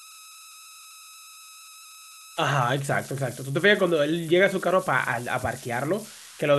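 Converter idle tones run throughout the clip, sitting about 20 dB below the speech. An undithered delta-sigma converter, fed only a small input during pauses and soft passages, locks into repeating bit patterns instead of producing random noise, and those patterns form a tone. Here the tone lies around 1.5 kHz, heard as a whistle in the gaps between phrases and as a grainy texture beneath the quieter speech.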